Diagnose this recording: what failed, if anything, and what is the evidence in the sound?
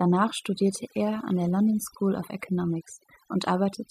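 A noise suppressor in the processing chain was set far too aggressive, producing overdone noise removal across the whole speech recording. Bands near its noise estimate are pushed to nothing, so the background drops to near silence with twinkling specks while quieter speech detail disappears.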